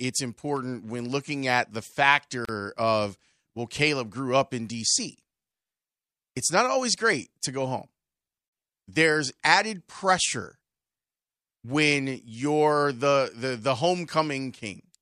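At 2.45 s, just before "of well", a gap at a join of encoded pieces cuts the speech for about 35 ms. Separately encoded segments, likely around 6 s each, were joined untrimmed, leaving encoder delay and end padding as an abrupt silence with smeared edges.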